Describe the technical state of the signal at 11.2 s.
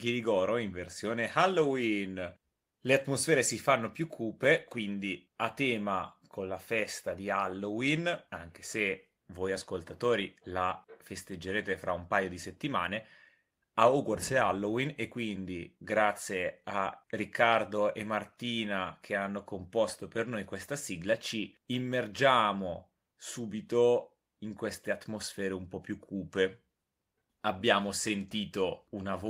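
At 11.2 s the speech signal is intact, with no audible fault at that moment.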